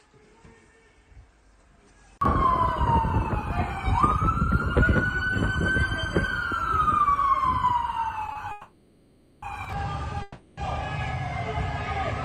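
At 8.32 to 8.38 s a packet was late and the jitter buffer ran empty, causing a short stall from a late packet. The receiver stretched the last sound for 30 ms, then resumed from the same point. Nothing is lost, but that sound is held too long, with a buzz or dip.

Two call audio freezes follow, likely caused by packets held up in transit that emptied the jitter buffer. From 8.51 to 9.45 s the last sound is continued for 910 ms as a fading buzz or hiss, and from 10.22 to 10.60 s for 350 ms, without falling silent. Each time the audio resumes where it stopped, leaving an inserted gap with nothing missing.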